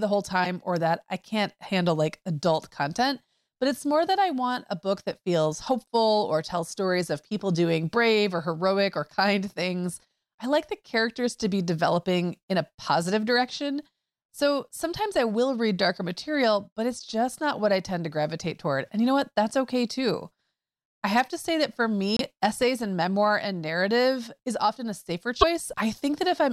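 The speech skips with a brief glitch at 0.43 to 0.46 s, 22.17 to 22.21 s and 25.41 to 25.44 s, in a stream of 26 ms MP3 frames, likely a broken MP3 bit reservoir.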